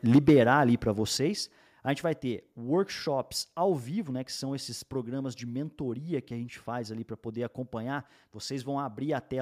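Speech recorded with microphone overload at the start and three stepwise drops in microphone volume. From 0.14 to 0.40 s the loudest syllables exceed the converter's limit by about 5 dB. Their peaks are sheared flat, with roughly 7 percent of samples clipped, which gives a harsh, crackly edge. The likely cause is an input gain set too high, so the converter runs out of headroom on the peaks. The level then steps down abruptly three times. The first is at 0.16 s, by about 4 dB, just before "ali para". The second is at 1.17 s, by about 7 dB, just after "ali para". The third is at 2.19 s, by about 2 dB, between "a gente vai" and "workshops ao vivo né". At each step, voice and background fall together instantly, with no gradual fade. This pattern likely comes from the call software detecting a hot or clipping input and lowering the device's input volume in discrete steps.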